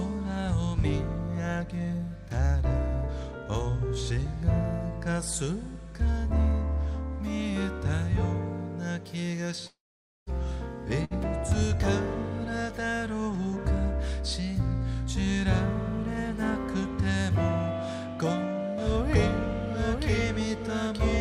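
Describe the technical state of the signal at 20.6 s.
At 20.6 s the signal carries a doubled audio track, most likely because the audio is being captured a second time through a slower path. From 18.78 s to the end, a second full-band copy runs about one second behind the original, roughly 5 dB quieter. It has no decay or room colouring, so the sound is overlaid with a distinct, slightly softer repeat of itself, and the copy cuts in abruptly at 18.78 s.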